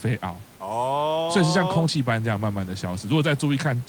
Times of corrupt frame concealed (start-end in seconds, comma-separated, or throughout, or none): none